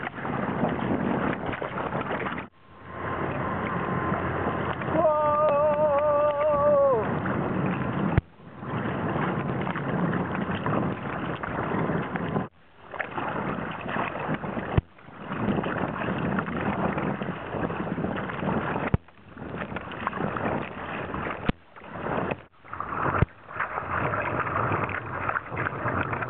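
No technical faults can be heard anywhere in the recording, and the signal holds steady throughout.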